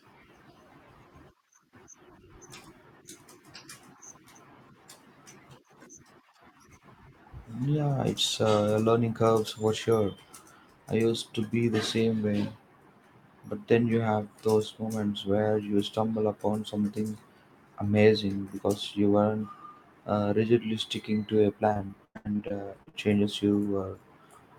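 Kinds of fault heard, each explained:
Repeated packet loss (robotic sound): between 21.73 and 23.09 s the speech breaks into a close run of holes, each up to 101 ms, patched by extending the previous sound. Unlike a lone dropout, the holes keep recurring, leaving a third of the stretch filled in and sounding choppy and robotic.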